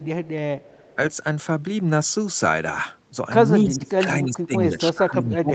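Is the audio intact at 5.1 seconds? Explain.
No. Speech suppressed in double talk runs from 4.7 s to the end at 5.54 s: the speech sinks by roughly 30 dB at its deepest. The likely cause is an echo canceller that, with both sides talking, mistook the talker for loudspeaker echo and attenuated it.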